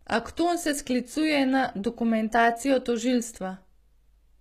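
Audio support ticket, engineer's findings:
Gritty, metallic treble on speech throughout. S sounds lispy. Nothing above 14.9 kHz. Likely HE-AAC compression, consistent with roughly 20 kbps. Upper band appears rebuilt by spectral band replication: lower bands copied upward under a coarse envelope. Harmonics misaligned across crossover. Damage plainly audible.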